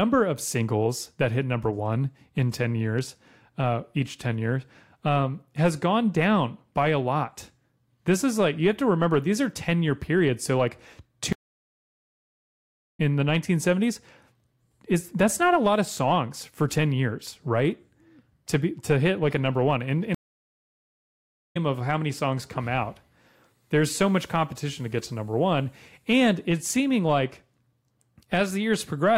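At 11.33 s the speech drops out for 1.66 s, a stream reconnect: the connection died, a fresh decoder picked up mid-stream, and it resumes about two seconds further on at "in the". Same again at 20.15 s, 1.41 s of silence, jumping roughly a second ahead to "of how many songs".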